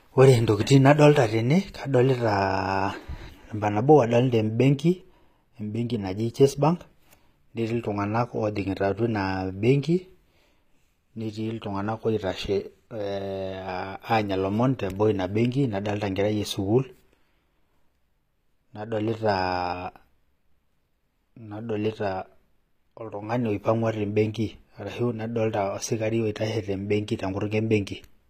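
Across the whole speech recording, the upper spectrum sounds synthetic: sibilants come out gritty and lispy, with a metallic sheen, and nothing is present above 15.4 kHz. This is likely HE-AAC compression, with damage plainly audible, consistent with a low bitrate around 24 kbps. The codec encodes only the lower band and regenerates the treble by copying lower content upward under a coarse envelope, so the rebuilt harmonics no longer align with the real ones.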